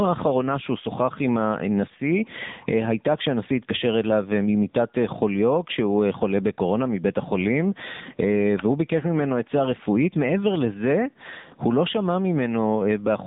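Gain pumping runs through the whole recording. The likely cause is input gain set far too high for the microphone, with a fast limiter or compressor clamping the level down every time the speech gets loud. The gain swings by around 15 dB. Quiet and loud passages end up closer in level, so the speech sounds flattened and squeezed.

The speech has also been through the AMR narrowband mobile codec (AMR-NB). At 8 kHz sampling, it models the vocal tract and drives it with a few pulses per short subframe, and the plainly audible coding damage fits its 7.95 kbps mode. The line passes only about 150 Hz to 3.7 kHz, with nothing above 3.8 kHz, so the speech sounds muffled and telephone-like. The sparse coding gives it a buzzy, synthetic edge.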